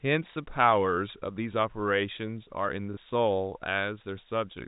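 Packet loss with last packet repeated occurs twice, at 0.33 to 0.36 s and 2.94 to 2.97 s. Each time a 30 ms packet goes missing and the receiver replays the previous one, so the speech has a small blip each time.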